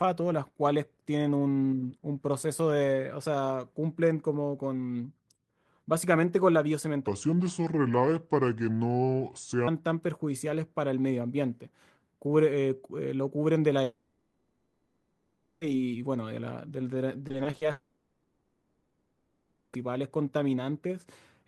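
From 7.07 to 9.68 s the speech plays at about 0.74 times its proper speed, a section at the wrong speed. Speed and pitch drop together, roughly five semitones lower, so the voice turns deep and drawn out, likely from playback against the wrong clock.

At 13.83 s a long network dropout begins, lasting to 15.63 s. For about 1.8 s the receiver stretches the last sound into a smeared, buzzy continuation with no true silence. This is likely a loss of incoming audio, and speech resumes with that stretch missing.

From 17.27 to 17.63 s there is repeated packet loss, heard as robotic sound. A rapid series of holes, none longer than 20 ms, is patched over roughly 39% of the span, giving a choppy texture. At 17.71 s a second long network dropout follows and runs to 19.75 s. For about 2 s the concealment extends the last sound as a fading buzz in place of the missing audio, likely again a network interruption, before the speech returns.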